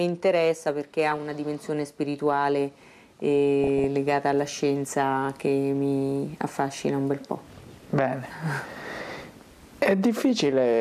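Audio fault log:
1.12–1.17 s and 3.64–3.84 s, DAB burbling: short blips of noise where a trickle of bit errors slips past error correction into the audio data, putting noise into single sub-bands.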